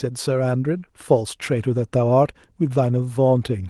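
Right through this speech, there's clock drift between sender and receiver. The sending end's clock runs around four percent fast, so audio arrives a bit quicker than the receiving side plays it out. The jitter buffer keeps creeping fuller, and the receiver has to shed material to keep up.

That shedding shows up as repeated timing corrections from 0.07 s to 3.66 s. The receiver trims tiny slices at uneven intervals, all in the same direction, which effectively plays the speech at about 104% speed. If heard at all, it comes across as small hiccups and a slightly jittery, hurried pace rather than any single obvious glitch, all carried over a call codec path whose top end stops around 12 kHz.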